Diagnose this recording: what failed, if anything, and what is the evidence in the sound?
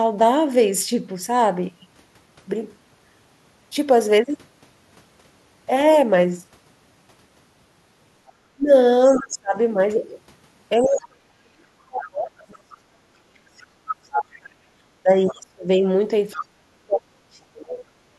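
Call processing: the other side's voice is leaking through at 8.27, 10.82, 11.99, 14.14, 15.28 and 16.32 s, about 5 to 25 dB down. It is likely an echo canceller's residue, timed to the far talker, not steady crosstalk.

Call processing again: speech is suppressed in double talk from 8.51 to 9.58 s and from 10.77 to 17.84 s, dipping up to about 40 dB. Unlike network dropouts, the gaps likely track the overlapping far voice.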